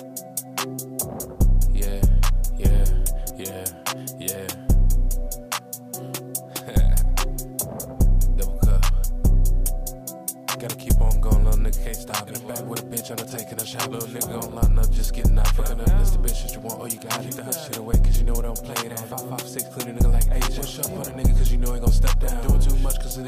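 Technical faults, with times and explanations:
Nothing here to flag; no technical faults turn up anywhere in the recording.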